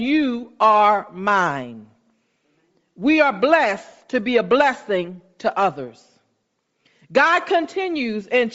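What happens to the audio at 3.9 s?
At 3.92 s there is a brief dropout from lost LE Audio frames. The decoder repeats the previous spectrum with randomised signs, so that instant becomes a short noisy smear. The gap fits a single lost 7.5 ms frame, too short to fade into silence.

Underneath, the speech carries plainly audible Bluetooth LC3 compression artefacts, likely from LC3 at 32 kbps with 7.5 ms frames. The upper band sounds noise-filled, which gives the voice a breathy, grainy edge.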